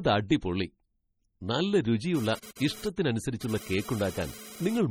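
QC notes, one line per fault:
Throughout: MP3 compression. The speech sounds watery and swirly, with metallic chirps on sibilants and smeared attacks, likely from MP3 encoding at around 32 kbps. Short of bits, the encoder zeroes weak spectral lines that switch on and off between frames, and nothing remains above 19.4 kHz.
2.15 to 4.79 s: GSM phone buzz. A raspy 217 Hz buzz with many harmonics, unrelated to the speech, sits about 17 dB below the signal and comes and goes, as a nearby 2G phone transferring data bursts its transmitter and the audio circuit rectifies those radio pulses.
2.39 to 2.43 s and 2.55 to 2.57 s: pre-echo. A short hiss runs ahead of two sharp attacks, spread over 42 ms and 15 ms, and both onsets sound soft. The codec spreads quantisation noise, sized for the loud attack, across the quiet start of its block.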